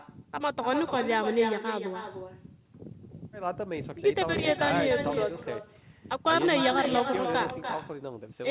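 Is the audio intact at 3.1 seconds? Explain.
No. At 3.1 s, as throughout the clip, there is echo with no canceller: the far end's loudspeaker feeds back into its microphone, returning the speech about a third of a second later at about 7 dB down. Unlike room reverb, it is a distinct, delayed, thinner repeat.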